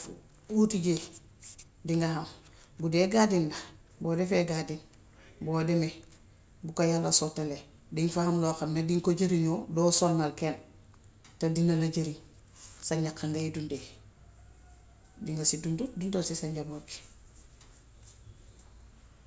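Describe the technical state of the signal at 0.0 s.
At 0.0 s the speech signal is intact, with no audible fault at that moment.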